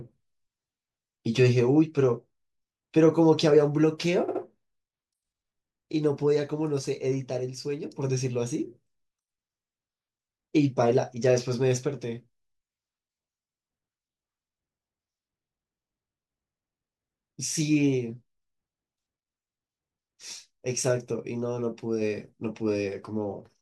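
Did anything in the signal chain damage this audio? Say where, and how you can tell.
Yes. A short run of compressed frames was stored or sent more than once, so the codec replays it as repeated frames. From 4.27 to 4.41 s, a 69.7 ms block is heard twice more as a stutter, stretching the speech by 139.3 ms.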